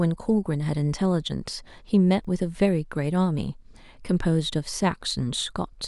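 At 2.25 s there's a block of digital silence, a tiny one, only about 0.67 ms, which points to a 32-sample block left unfilled. The speech drops out hard and straight back, so you hear it as a quick tick rather than a gap.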